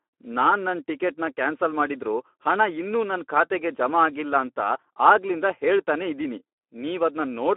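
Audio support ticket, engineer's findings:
Speex codec throughout: hoarse, noisy speech from starved CELP excitation, sounds like an 11 kbps mode. Band limited to 250 Hz–3.4 kHz, nothing above 3.8 kHz.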